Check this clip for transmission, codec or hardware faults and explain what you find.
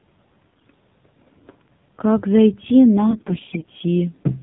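Two faults are present. Throughout, the speech passed through an AMR narrowband mobile codec at a low rate that fits the 7.4 kbps mode. Nothing above 4 kHz survives, and the voice sounds plainly buzzy and synthetic.

From 0.50 to 0.78 s and again from 3.08 to 3.70 s, AMR bit errors flipped roughly one in ten of the weakly protected frame bits. This misplaced the excitation pulses, so the voice turns hoarse, scratchy and gargly while keeping its pitch and level.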